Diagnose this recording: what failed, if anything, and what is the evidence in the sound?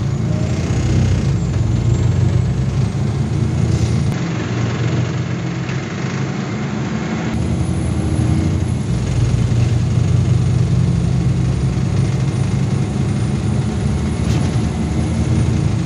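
The input stage likely switched to a poorer device from 4.12 s to 7.34 s. Through that span nothing is present above 7.6 kHz, so the sound turns duller. The level drops by about 5 dB, and a different background noise sits roughly 40 dB below the signal. There is no silence at either switch. The change in bandwidth, level and noise floor fits a second microphone or a headset call profile taking over the input and then handing back.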